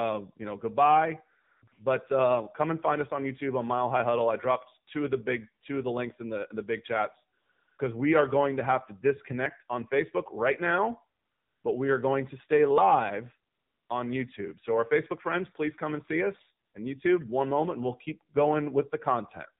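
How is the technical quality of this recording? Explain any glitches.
The recording has clear technical damage. The speech sounds like a mobile phone call throughout, with artificial hiss filling several pauses and two brief skips.

AMR narrowband mobile codec: The voice is muffled and plainly buzzy, with nothing above 4 kHz and a synthetic edge. The speech is resynthesised from a vocal-tract model and a few pulses per subframe. The degree of damage fits a low AMR-NB mode around 7.4 kbps.

AMR comfort noise: Pauses are filled with a smooth, steady hiss that switches on and off. This happens at 1.44–1.62 s (after "you know goodbye", before "but uh come and"), 1.68–1.72 s, 7.38–7.78 s, 11.20–11.64 s (after "right now", before "but we are going"), 13.52–13.90 s and 16.66–16.74 s. During these gaps the phone sent no speech frames, so the receiver generated substitute noise from a rough spectral description.

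Dropped buffer (overrun): There is a small jump forward at 9.46 s, after "going to have to", and another at 12.78 s. Each loses about 20 ms of audio with no gap of silence. The likely cause is samples being overwritten before the software collected them, which splices the two sides together.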